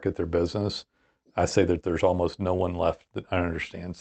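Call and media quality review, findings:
Clock drift between sender and receiver, whole clip: slight hiccups recurring at uneven intervals. Probable cause is the sender clock running roughly 2% slow against the receiver. The jitter buffer keeps draining, so playout has to fill the gaps.

Repeated timing corrections, 0.08–3.86 s: small stutters at irregular spacing, all lengthening the sound, with playback near 98% speed. The receiver is repeating short pieces to keep pace with the slow sender, adding around 70 ms in total.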